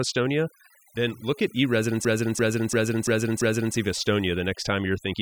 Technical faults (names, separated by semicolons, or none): overdone noise removal; system hang loop